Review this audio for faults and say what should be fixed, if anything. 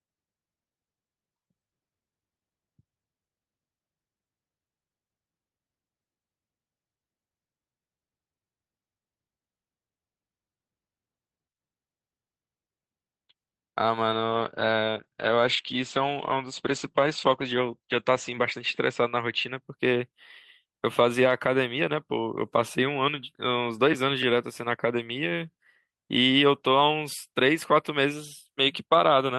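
Around 14.13 s the speech goes rougher and duller. That's a call bitrate drop, and it lasts until about 19.57 s. The bandwidth estimate fell and the Opus encoder was told to spend far fewer bits. The coarseness fits a fall from roughly 32 kbps to somewhere near 11 kbps, and it sits at its worst for about 3.6 s before climbing back. Compared with the normal call path's 8 kHz top end, the top end gets trimmed and everything turns watery. To fix it, give the call more network headroom or tune congestion control so the bitrate estimate doesn't collapse on short dips.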